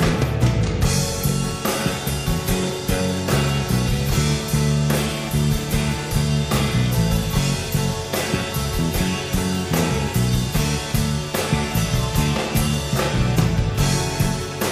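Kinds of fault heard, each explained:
Nothing here stands out as a fault; it's just the sound itself with no glitches, dropouts or distortion to point to.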